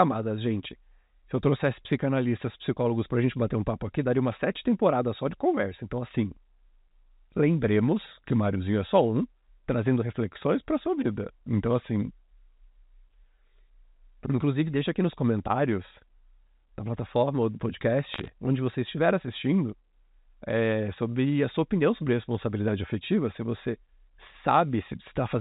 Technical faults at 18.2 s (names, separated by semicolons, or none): bit errors on a digital phone line